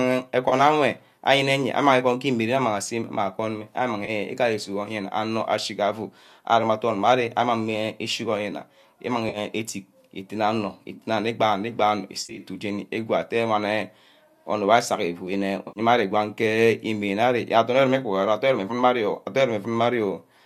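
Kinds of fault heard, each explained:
AAC frame loss with concealment: smeared, phasey patches of 30 to 110 ms, filled in from the last good spectrum instead of going silent like a plain dropout.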